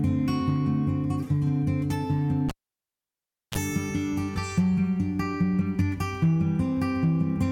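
At 2.49 s the music is cut by a cable pulled and plugged in: a pop, about 1.04 s of near silence, a 33 ms burst of 60 Hz mains buzz as the tip makes contact, then a second pop at 3.58 s. On a spectrogram this appears as two vertical broadband lines framing an empty gap, with 60 Hz harmonic stripes just before the second.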